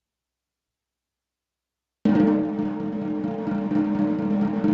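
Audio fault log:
throughout, gain pumping: gain ducks about 10 dB under loud sounds, likely a fast limiter on excessive gain; squashed waveform.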